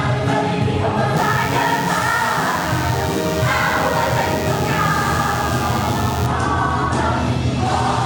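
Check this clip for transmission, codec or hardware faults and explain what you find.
There's one hardware-side fault: DECT cordless phone buzz from about 1.17 to 6.27 s. A nearby DECT handset or base pulses its radio every 10 ms, and the audio circuitry rectifies those bursts, so you get a thin, steady 100 Hz buzz, rich in harmonics, sitting roughly 15 dB under the sound.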